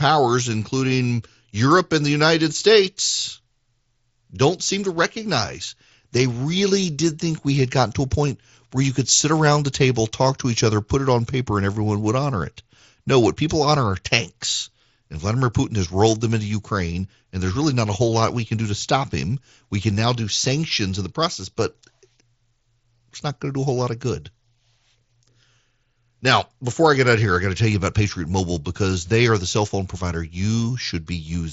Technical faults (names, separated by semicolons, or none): none